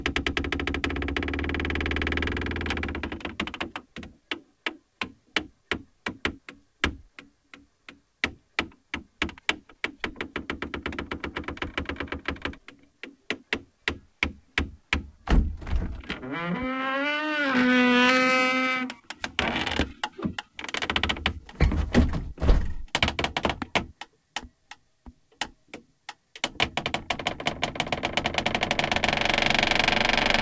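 No faults are present; the audio has passed through a call path whose codec leaves nothing above 8 kHz, which fits a G.722 wideband link.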